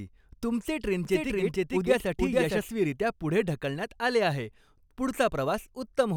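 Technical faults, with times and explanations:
1.05–2.59 s, doubled audio track: a full-band copy of the speech runs about half a second behind at roughly equal loudness, likely from a second, slower capture path. Unlike an echo, it has no decay or room colour, and it switches on and off abruptly.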